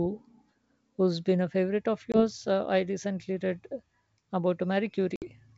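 Lost packets on an ADPCM call desynchronise the decoder's predictor and step size from the sender's in this G.722 speech recording. A 20 ms loss at 2.12 to 2.24 s, right after "been a favorite of", and a 60 ms loss at 5.16 to 5.25 s leave hard-edged silent gaps, with speech resuming slightly distorted until the decoder resettles.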